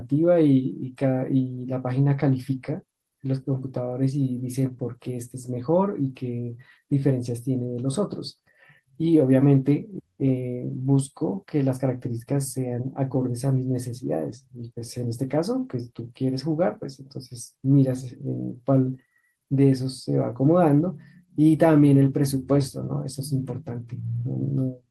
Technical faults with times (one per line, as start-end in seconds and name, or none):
0.00-24.90 clock drift between sender and receiver
0.04-24.63 repeated timing corrections